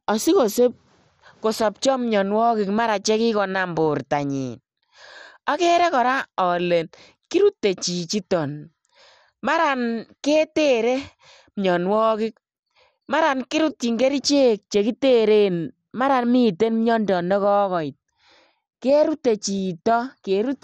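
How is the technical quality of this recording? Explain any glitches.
Technical quality is poor, with heavy coding damage throughout the speech. From start to end it sounds dull, with a gurgling, granular texture and nothing above 15.3 kHz, which fits a low bitrate around 56 kbps. The likely cause is MP2 compression: starved of bits, the encoder switches upper sub-bands on and off and coarsely quantises the rest, giving that flickering, watery grain.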